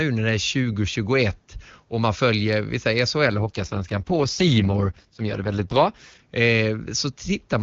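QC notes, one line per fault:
3.26 to 6.20 s, AMR rate drop: the speech turns rougher and more synthetic, consistent with the network lowering AMR-WB from 23.85 to 6.6 kbit/s to protect a weak link. On the spectrogram the bandwidth stays unchanged and harmonics look smeared. The waveform shows no gap.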